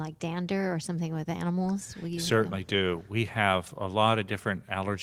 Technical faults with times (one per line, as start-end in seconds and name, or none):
none